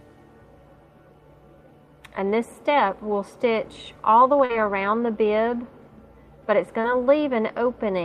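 At 4.45–4.51 s and 6.81–6.86 s, short concealed packet loss: about 40 ms and then 20 ms of audio arrived too late, so the decoder extended the preceding sound and blended back. It comes through as a brief smear or wobble rather than the hard silent gap of a plain dropout.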